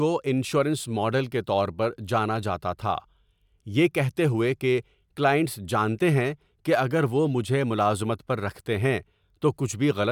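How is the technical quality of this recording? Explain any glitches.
No technical faults can be heard in this recording.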